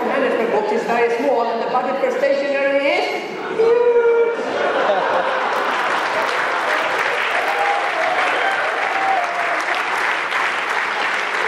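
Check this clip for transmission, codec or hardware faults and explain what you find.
Two faults can be heard.

From 5.52 to 7.63 s there is a block size mismatch (padded). One stage hands over shorter blocks than the next stage reads. The remainder of each block is filled with silence. That puts a tiny gap in every block. The gaps repeat at 46.9 Hz, which fits a 1024-sample read block, and they produce a low, steady buzz over the audio. The slowdown is only about 0.1 percent, so timing and pitch stay close to normal.

At 9.17 s, compressed frames were skipped. Part of the coded stream never reached playback, either missing or rejected by the decoder as damaged. The audio jumps forward by about half a second. That fits roughly fifteen frames of 32 ms each. The join is followed straight away by later material.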